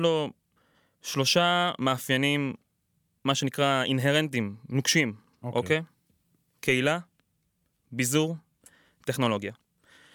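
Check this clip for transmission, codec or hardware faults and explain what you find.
Nothing to flag: the speech shows no transmission, codec or hardware faults.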